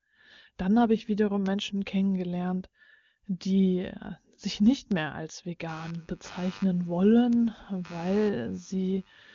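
At 1.46 s and 4.92 s a flipped bit in the digital path throws a sample or two far off its value and back, giving a bit error spike: one sharp, broadband tick unrelated to the speech. From 5.69 s to the end, shifting load on the computer disturbs the shared ground of the audio circuit, so computer activity noise rises as a buzzy chirping that pulses at around a hundred times a second, sitting well below the speech. Two more bit error spikes land at 5.95 s and 7.33 s, each another isolated tick.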